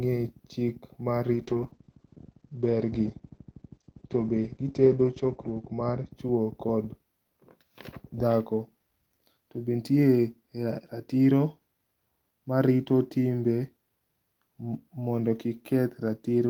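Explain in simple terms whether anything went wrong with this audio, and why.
From about 1.35 s to 6.17 s there is a call bitrate drop. The connection seemed to weaken, so the call sent much less data. The speech turns rough and muffled, with the crisp high sounds cut away, until normal quality returns.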